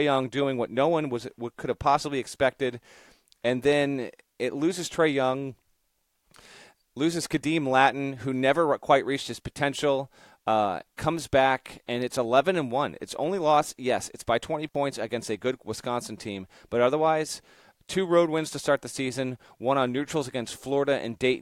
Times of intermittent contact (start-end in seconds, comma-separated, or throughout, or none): 14.68-14.76